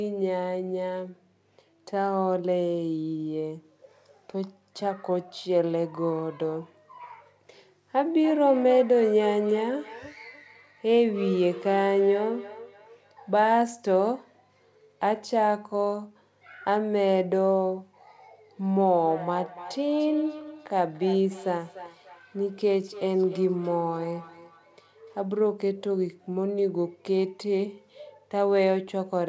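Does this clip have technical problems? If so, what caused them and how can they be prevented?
Yes. From 7.94 to 13.64 s, and again from 18.81 to 25.24 s, the speech picks up feedback echo between two devices: each phrase comes back roughly every third of a second, thinner and more ringing on each pass, peaking at about 13 dB below the speech the first time and about 16 dB below the second. Two devices in the room share the call, each replaying what the other's mic captured, and neither echo canceller knows about the other's speaker. Keep only one device's audio live per room, or mute the second device's speaker and mic.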